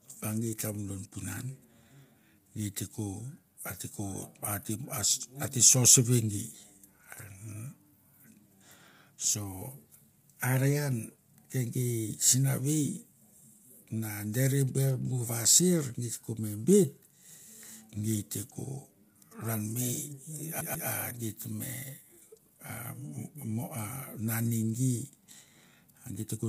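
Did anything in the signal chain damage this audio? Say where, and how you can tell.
Yes. The whole recording carries plainly audible codec damage, likely from low-delay AAC compression of the AAC-ELD kind: the speech sounds rough and grainy, with noise filling the gaps between harmonics, and nothing above 15.6 kHz. The graininess fits about 32 kbps. Unlike a plain low-pass filter, this smears the harmonic structure itself rather than only dulling the top.

A storage and playback fault appears from 20.61 to 20.89 s. A CD stuck on one turn replays the same 0.14 s slice twice, with a brief mute at each jump as the laser is thrown back a track. The loop length is exact and the repeats are identical, which separates it from network packet-loss concealment, whose repeats fade or vary.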